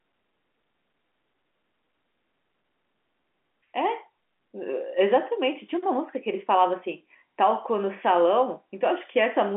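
No faults to report: the speech carries the usual G.711 telephone coding, its band held to roughly 200 Hz to 3.4 kHz, which fits a 64 kbps A-law line.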